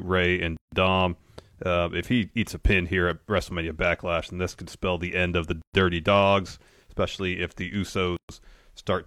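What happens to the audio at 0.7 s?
Right around there the speech drops into a gap at a join of encoded pieces, roughly 154 ms of silence from 0.57 to 0.72 s. Separately encoded chunks were butted together untrimmed, so encoder delay and end padding leave a hole with codec-smeared edges before the speech resumes where it stopped.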